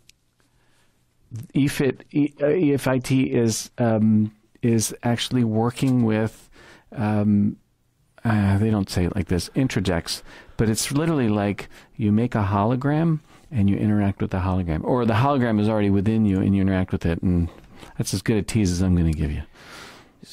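For the first 4.0 s the audio sounds dull, with nothing above 14 kHz and coarse codec artefacts, then it brightens abruptly with no gap. This is an adaptive stream starting at a low bitrate, consistent with roughly 48 kbit/s AAC stepping up to about 96 kbit/s once the connection was measured.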